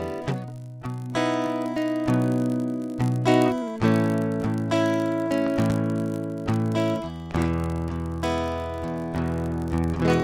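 A filter in the processing chain is restarting on every block, throwing away its stored state and beginning each block from silence, so this music clip carries a small transient at the start of each block throughout. Those transients repeat at 50 Hz, which points to blocks arriving fifty times a second, and they blend into a steady buzz under the music that grows and shrinks with its level, louder in full passages and fading back in quiet ones. Separately, sudden voltage steps or pulses reach the signal path, likely from a plug, switch, static discharge or driver glitch, and the circuits downstream shape them into audible loud pops. Between 5.47 and 5.73 s there are two pops in quick succession, peaking about 10 dB above the music. At 7.31 to 7.34 s a single, shorter pop lands about 5 dB above it. Each is heard as a sharp crack sitting on top of the music, which keeps playing underneath.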